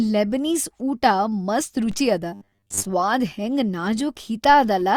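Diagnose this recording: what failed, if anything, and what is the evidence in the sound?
A DC step, at the converter or analogue input stage, shifts the zero line of the waveform at 1.92 s and holds it there until about 4.49 s, where it drops back. Each transition produces a brief low thump while the speech carries on unaffected. On the waveform the whole trace sits visibly off-centre between those two points. On a spectrogram each edge appears as a short burst of energy at the very bottom of the frequency range.

From 2.34 to 2.86 s the speech takes on a rigid, metallic buzz fixed at 100 Hz that loosely tracks the syllables. This is robotic sound from repeated short buffers, likely at the driver or buffer stage. A 10 ms chunk of audio is looped while most of the real signal in that stretch is skipped. On a spectrogram, evenly spaced horizontal harmonics at multiples of 100 Hz replace the natural pitch contour. 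The waveform shows identical short segments repeating.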